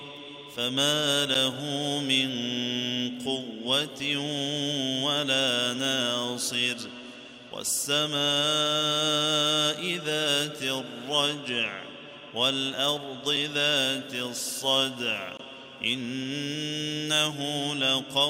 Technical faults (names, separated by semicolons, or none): gap between stream segments